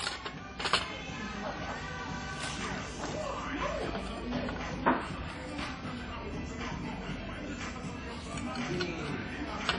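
Everyday sounds, carrying plainly audible codec damage from start to finish, likely from WMA compression at a low bitrate, which fits about 32 kbps. Nothing survives above 10.1 kHz. A plain low-pass filter would leave what remains clean. Here, the transform codec's long blocks smear quantisation noise across tens of milliseconds, and weak spectral lines drop out. The result is the ringing, washy texture and signal-following hiss that set WMA apart from simple band-limiting.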